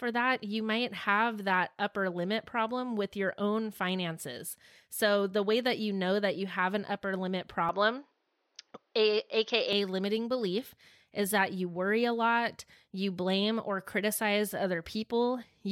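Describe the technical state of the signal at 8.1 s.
At 8.1 s the input has likely switched to a poorer device (7.69–9.73 s): nothing above 6.4 kHz, so the sound turns dull.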